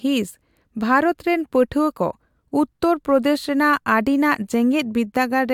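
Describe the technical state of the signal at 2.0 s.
At 2.0 s the signal is intact, with no audible fault at that moment.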